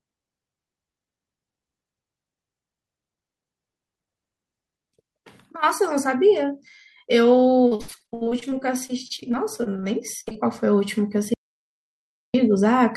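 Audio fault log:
7.67–9.84 s, repeated packet loss (robotic sound): the speech turns choppy, breaking up 22 times over about two seconds, with the longest hole near 73 ms. Each gap was bridged by stretching the previous sound, so roughly a quarter of this stretch is synthetic filler and about 0.46 s of real speech is missing.
10.20–10.28 s, burst of packet loss: a brief held, fading smear of about 60 ms replaces the speech. Several consecutive packets arrived too late or not at all, so the receiver extended the last sound while lowering it, and speech resumes with that slice skipped.
10.28 s and 10.32 s, short concealed packet loss: two quick wobbles, each around 20 ms, follow straight on from the burst. Each is a small hole the decoder papered over by continuing the preceding sound and blending back.
11.34–12.34 s, audio dropout to silence: the speech cuts out to silence, with no room tone, for about 1.0 s before returning mid-flow. 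The input feeding the recorder was likely lost, so silence was written and that second of speech is gone.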